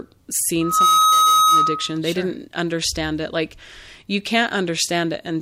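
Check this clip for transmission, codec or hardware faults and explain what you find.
One fault is present: loudspeaker feedback squeal. It runs from 0.61 s to 1.98 s in this speech clip. A single tone at 1.3 kHz appears and swells over roughly a third of a second. It then holds about 10 dB above the speech. The cause is a closed loop. A microphone hears the loudspeaker it feeds. At 1.3 kHz the loop gain exceeds one. So that frequency keeps feeding itself and grows into a steady whistle.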